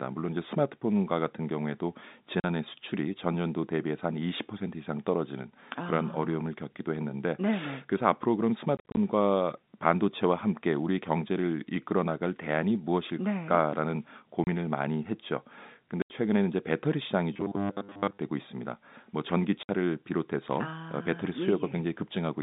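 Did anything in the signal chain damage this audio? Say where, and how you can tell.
Yes. Hard-edged silent holes at 2.4, 8.77 to 8.97, 14.44, 16.02 and 19.63 s: network packet loss filled with silence, gaps in 10 ms steps.

From 17.34 to 18.18 s the speech becomes a rigid metallic buzz at 100 Hz, likely a buffer underrun repeating a 10 ms buffer: robotic sound from repeated short buffers.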